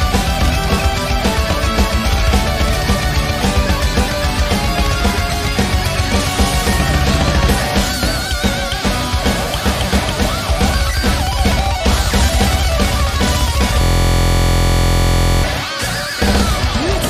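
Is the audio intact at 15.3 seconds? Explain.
No. At 15.3 s the audio is inside a system hang loop that runs from 13.81 to 15.43 s. The computer or driver stalled while the sound hardware kept replaying its ring buffer, so a single 23.22 ms slice, which fits a 1024-sample buffer, repeats exactly about 70 times. Because the slice is so short, it comes across as a steady buzz at 43.1 Hz.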